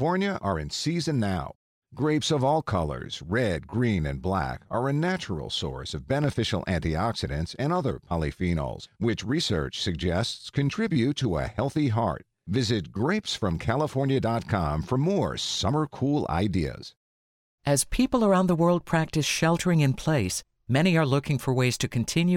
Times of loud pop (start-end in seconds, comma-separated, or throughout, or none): 5.08-5.10, 6.24-6.30